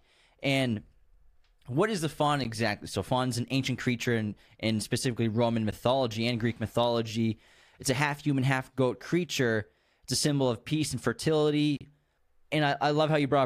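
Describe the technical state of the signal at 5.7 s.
At 5.71 s there is a block of digital silence lasting about 11.6 ms. The output buffer was likely not filled in time, so the audio dropped out, which fits a 512-sample buffer. The gap is short enough to be heard as a brief tick or dip.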